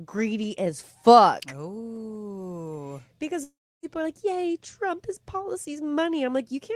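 A speech clip with a long network dropout from 3.43 to 3.86 s: the last sound stretches into a fading buzz, then about 0.31 s of near-silence follows before speech resumes with roughly 0.4 s missing. The likely cause is a run of lost packets that the receiver concealed and then muted. A spectrogram shows a smeared, frozen band decaying into an empty gap, and the waveform tapers to a flat line before jumping back.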